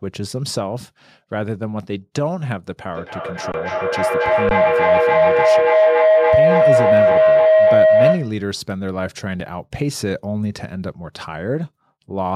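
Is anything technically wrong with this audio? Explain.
Yes, there are two problems: a sustained feedback howl and three brief dropouts from output underruns.

From 2.91 s to 8.43 s there is a feedback howl. Two devices in the same room appear to be on the call, so sound leaves a loudspeaker, re-enters a microphone and comes back louder on each pass. Instead of decaying, the repeats narrow to a tone of roughly 700 Hz that peaks at about 10 dB above the speech and pulses around every 300 ms, the loop's round-trip time.

Underruns with a held sample occur at 3.52 to 3.54 s, at 4.49 to 4.51 s, and at 9.40 s. The playback buffer ran dry, and the converter froze on its last output value until data arrived. The waveform flattens at that held value, so the sound cuts out abruptly for 20 ms, 20 ms and 7 ms. About as much live audio was dropped during each gap.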